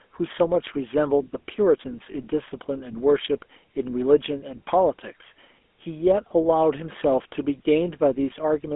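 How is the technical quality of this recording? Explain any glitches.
The quality is poor: a low-rate mobile codec degrades the whole recording, and one brief dropout occurs near the start.

GSM full-rate codec, throughout: the encoder models the vocal tract and drives it with a sparse, regularly spaced pulse excitation, which fits a 13 kbps GSM full-rate stream. The result is a buzzy, gravelly roughness on the speech, within a narrow band from 250 Hz to 3.4 kHz.

Lost GSM frames, 2.12 to 2.15 s: one bad frame was concealed by repeating the last good frame's settings. The gap is about 20 ms, which fits a single lost frame, and it is heard as a brief, rough, metallic ring.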